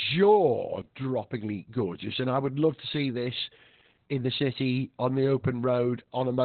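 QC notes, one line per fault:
Throughout: Opus voice compression. Nothing above 4.3 kHz and the excitation is coded coarsely, so speech sounds muffled, hoarse and slightly robotic. This fits narrowband SILK at around 8 kbps.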